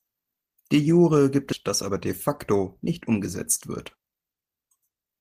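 At 1.52 s a skip ahead drops roughly 0.7 s of speech with no fill, so the waveform splices directly across an abrupt spectrogram discontinuity. From 1.64 to 3.18 s, jitter buffer speed-up trims about 100 ms of pitch periods, running speech 5% faster at unchanged pitch. The harmonics stay level while syllables compress. From 3.68 to 5.20 s it speeds up again, at 12% with roughly 200 ms removed, sounding noticeably hurried.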